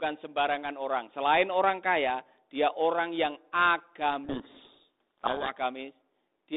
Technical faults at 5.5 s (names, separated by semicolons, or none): codec payload misread